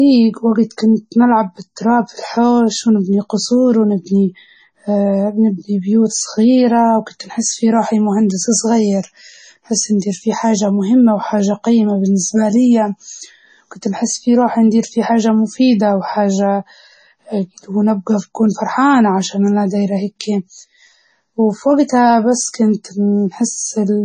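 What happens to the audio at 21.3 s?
At 21.3 s the speech is still being squeezed through a starved encoder, likely heavy MP3 compression, as it is for the whole clip. Running so short of bits, which fits roughly 24 kbps, it removes everything above 9 kHz and keeps switching weak frequency lines on and off. The result is dull, watery, swirling speech with metallic chirps on s sounds and smeared onsets.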